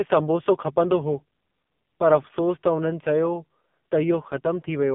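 Speech sounds thin, buzzy and synthetic throughout, limited to 150 Hz to 3.6 kHz. This is heavy AMR narrowband mobile codec damage, fitting a low bitrate near 5.9 kbps.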